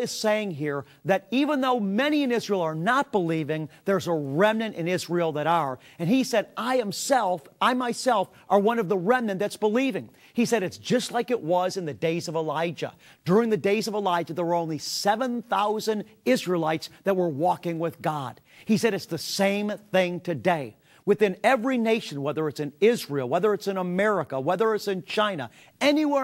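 No technical faults can be heard anywhere in the audio.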